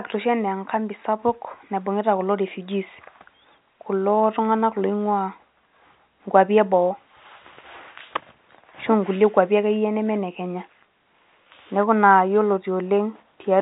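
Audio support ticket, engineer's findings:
No faults found on the speech clip; telephone-band sound consistent with G.711 A-law coding, working as designed, nothing to action.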